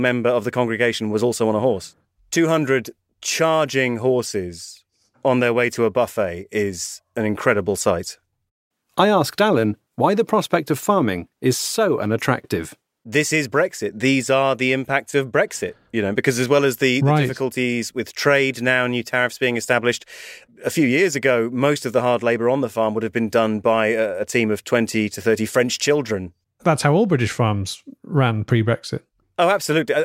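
Throughout the speech, sample clock jitter adds a fine hiss or grittiness that swells on loud, bright syllables and drops away in the pauses. The converter's clock wanders by something like a microsecond or two, so each sample is taken at a slightly wrong moment. Steep, high-frequency parts of the waveform suffer most, leaving an error roughly 40 dB below the signal. On a spectrogram, a faint broadband haze tracks the voiced energy and vanishes in silent gaps.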